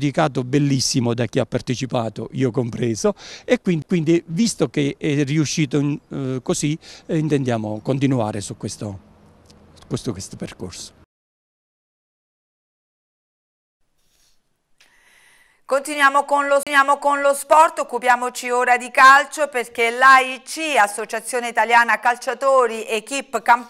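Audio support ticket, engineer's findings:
CD skip at 3.82 s: brief mute of roughly 10 ms, tick, audio resumes at a different point. Probable component: disc transport and laser pickup. Mechanism: knock or disc flaw throws the laser onto another turn of the spiral.

CD skip, 16.63–16.67 s: mute of around 30 ms, then discontinuous resumption forward or back. Same transport fault. The player mutes during the track jump, then continues from the new position.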